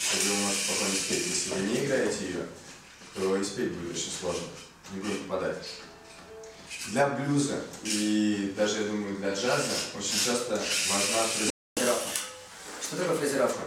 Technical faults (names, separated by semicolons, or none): playback stall; catch-up at higher speed